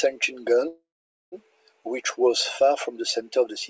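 From 0.68 s to 1.35 s the speech stalls in a call audio freeze, likely from packets held up in transit until the jitter buffer ran dry. The last sound is stretched into a brief fading buzz, then about 480 ms of silence, before the talker picks up again at "which was far from". Unlike a packet-loss dropout, nothing is skipped; the speech resumes exactly where it stopped, about 640 ms late, with highs cut above 8 kHz as the call codec does.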